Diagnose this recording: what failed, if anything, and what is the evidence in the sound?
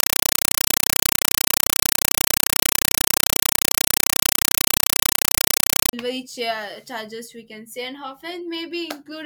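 Playback stage: a compressed stream played as audio. From 0 to 5.93 s, loud chattering static replaces the speech: 5.33 ms noise bursts repeating 31.25 times a second, silence between. That fits an undecoded AC-3 bitstream, likely 256 kbps, passed over the digital link as plain samples.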